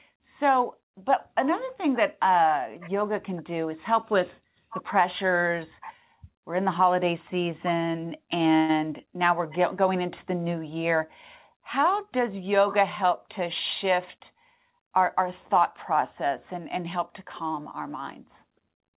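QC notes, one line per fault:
8.56–8.71 s, call audio freeze: for about 0.13 s the sound stops progressing and the last fragment is stretched into a short fading buzz or hiss before the speech resumes where it left off. Nothing appears to be lost. Instead, a gap has been inserted and everything after it arrives later. This is likely the jitter buffer running dry while packets were held up in transit, with the receiver extrapolating the last sound until they arrived.
12.66–13.39 s and 13.84–15.21 s, jitter buffer speed-up: in both stretches the speech runs about 5 percent fast at unchanged pitch, so it sounds slightly hurried. The receiver is repeatedly cutting out short pitch-period-length slices to drain excess buffered audio, roughly 50 ms in the first run and 70 ms in the second. Throughout, the audio has no content above 4 kHz, which fits a G.711 mu-law call path at 64 kbps.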